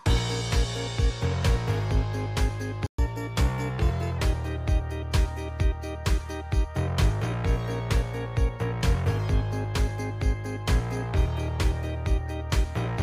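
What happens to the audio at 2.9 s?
At 2.87 s the sound cuts out for 120 ms, until 2.99 s, then resumes. This playback stall was likely caused by the player running dry or its thread being blocked. The waveform shows a flat, empty gap, and the spectrogram a blank vertical band.

From 2.99 s to 4.18 s comes catch-up at higher speed. The player resamples its backlog at 1.1 times normal rate to regain the lost time, so everything runs faster and about one and a half semitones sharp before settling back. On a spectrogram, harmonics shift upward and sit closer in time.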